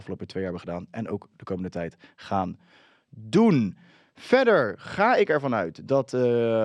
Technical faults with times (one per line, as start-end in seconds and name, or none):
none